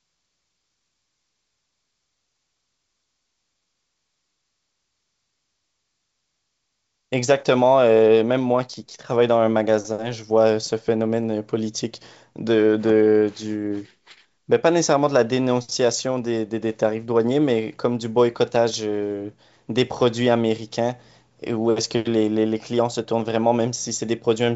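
No faults are audible in the speech, which is carried over G.722 wideband coding at 64 kbit/s, its content stopping near 7.7 kHz, with at most a faint trace of coding noise.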